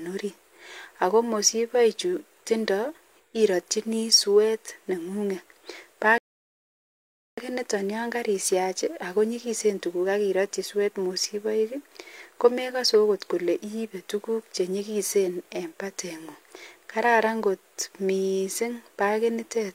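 At 6.18 s the speech halts in a rebuffering stall. Playback starved and waited. Silence lasts until 7.38 s, then resumes exactly where it stopped, adding about 1.2 s.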